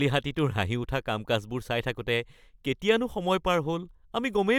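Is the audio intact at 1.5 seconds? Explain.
Yes, the speech at 1.5 seconds plays through cleanly, with no dropout, click, glitch or other fault at that moment.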